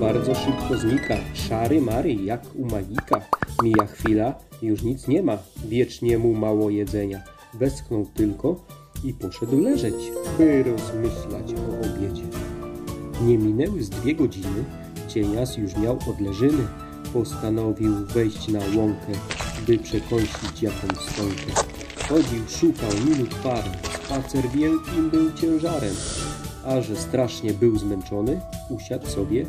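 No technical faults are audible.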